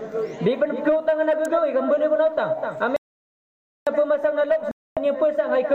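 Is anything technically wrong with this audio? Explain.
Yes, there are three separate faults.

At 1.45 s there is an electrical switching spike: a sharp snap laid over the sound, lasting only a few milliseconds. It is likely from a nearby switch, motor or static discharge arcing and being picked up by the audio line. On a waveform it is a narrow vertical needle standing above the surrounding level. On a spectrogram it is a thin bright line running straight up through all frequencies.

From 2.96 s to 3.87 s there is an audio dropout to silence. The sound cuts off abruptly and returns in mid-flow, and about 0.9 s of material is simply gone. The gap is silent with no room tone. The likely cause is a lost input, such as a disconnected device, failed link or accidental mute, while recording carried on writing silence. The waveform shows a dead-flat line, and the spectrogram shows a fully black block with hard edges.

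From 4.71 s to 4.97 s there is a Bluetooth stall, a 253 ms hole of silence after which the sound picks up again. This is likely from radio interference delaying packets until the headphone buffer ran empty, so playback paused until the resent data arrived. On the waveform it appears as a short flat gap with sudden cut-off and resume points. On the spectrogram it is a narrow black vertical band.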